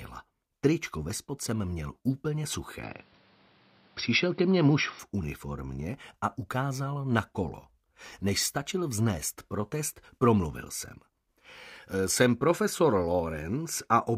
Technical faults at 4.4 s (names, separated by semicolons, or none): input switched to a poorer device